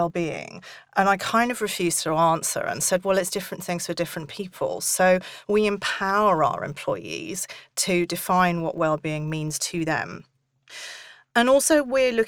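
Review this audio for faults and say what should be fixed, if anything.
There's a 50 Hz buzz riding under the speech the whole way through, which is the filter restarted on every block: each block starts from silence, clicking at the block rate. Keep the filter's state between blocks instead of resetting it.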